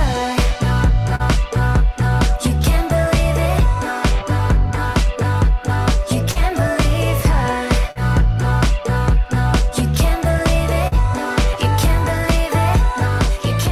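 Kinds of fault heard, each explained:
Short concealed packet loss: About 40 ms of audio failed to arrive in time at 1.15–1.22, 6.31–6.38, 7.91–7.98 and 10.87–10.95 s, and the receiver bridged each gap by extending the preceding sound before fading back into the real signal. Each one is heard as a brief smear or wobble. There is no drop to silence and no sharp click, which separates it from an unconcealed dropout or a splice discontinuity.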